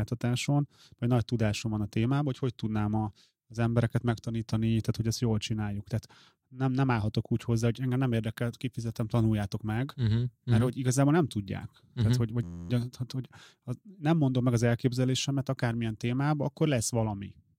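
At 12.43 to 12.70 s, between "hogy vagy" and "tehát hogy az nem", a system hang loop occurs. The driver stalled while the hardware kept replaying one 11.6 ms block, which fits a 512-sample buffer. It repeats 23 times, producing a steady 86 Hz buzz.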